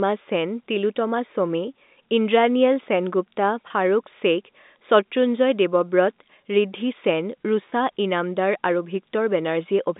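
At 3.68–3.70 s and again at 7.70–7.72 s, packet loss with pitch repetition fills each 20 ms gap, fitting one lost packet, with a briefly held, buzzy tone rather than a silent dropout, over the narrow telephone band.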